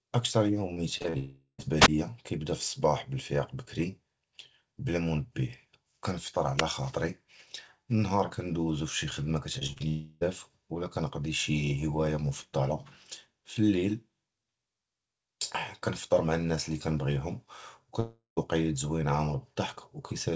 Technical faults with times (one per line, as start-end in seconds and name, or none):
0.74-1.16 repeated packet loss (robotic sound)
1.18-1.60 long network dropout
1.80-1.88 wireless microphone squelch dropout
6.57-6.63 wireless microphone squelch dropout
9.52-9.82 repeated packet loss (robotic sound)
9.88-10.23 long network dropout
18.00-18.39 long network dropout